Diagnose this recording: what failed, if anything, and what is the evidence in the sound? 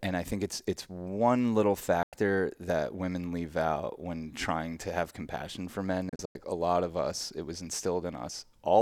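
Digital broadcast dropout in reception. At 2.03 s the speech fades out within 3 ms and is silent until 2.13 s; from 6.09 to 6.36 s several short holes appear, the longest 96 ms. The receiver muted failed frames, which fits 32 ms frames, and that content is lost.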